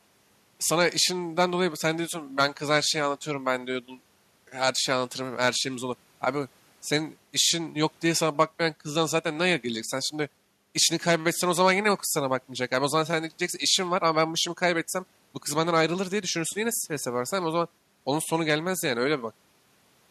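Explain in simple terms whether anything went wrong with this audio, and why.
Nothing went wrong with this audio, because no fault can be heard anywhere in it.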